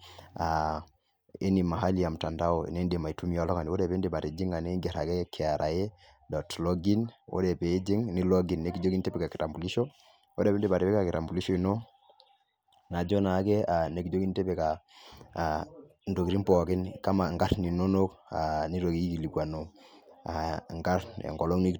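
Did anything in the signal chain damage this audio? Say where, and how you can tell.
No, nothing in the signal chain damaged this audio.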